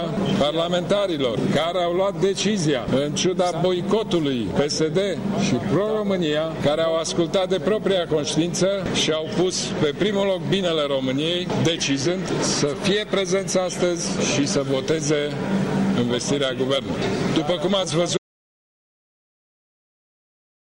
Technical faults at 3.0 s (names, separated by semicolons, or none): none